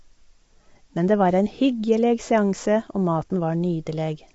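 It's a short speech clip with plainly audible low-delay AAC compression damage the whole way through. The voice comes across rough and grainy, with noise filling the gaps between the pitch harmonics, and nothing at all above about 7.7 kHz. That's likely AAC-ELD, the video-call codec, whose short frames of roughly 500 frequency lines are coded coarsely at low bitrates. The level of damage fits a bitrate around 24 kbps.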